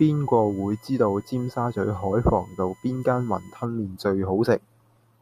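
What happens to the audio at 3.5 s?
A steady, fixed-pitch whine at 1 kHz sits about 35 dB under the speech, running from the start until 3.65 s, so it is still present at 3.5 s. This is USB whine: current drawn in 1 ms bus frames leaks through power or ground into the audio.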